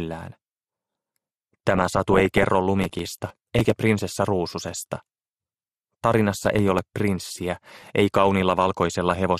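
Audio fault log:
throughout: MP2 compression. The sound is dull and band-limited, with a gurgling, granular grain under everything that is plainly audible. The codec likely ran at a low rate, consistent with about 80 kbps MP2. At that rate there are too few bits to spread across its 32 sub-bands. Upper bands drop out and flicker back. The bands that survive are quantised coarsely, which gives the gritty texture.
1.70 to 2.44 s, 4.94 to 5.02 s, 7.08 to 7.82 s, 8.85 to 9.19 s: DAB burbling. Four bursts of burbling sit over the sound. The first and third are longest. Each points to a reception error rate of around half a percent or less. Corrupt bits slip past error correction into the MP2 data. Wrong samples put short blips of noise in single sub-bands, and wrong scale factors make sub-bands jump in level for up to a frame.
2.82 to 3.70 s, 6.44 to 6.79 s: processor overload crackle. Two stretches of gritty, tearing crackle ride on the sound and stop. 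The first is longer and denser, with roughly thirty misses against roughly ten in the second. The buffers were about 5 ms. Each time a deadline is missed, a scrap of old audio is replayed with hard edges. Those rapid discontinuities fuse into crackle.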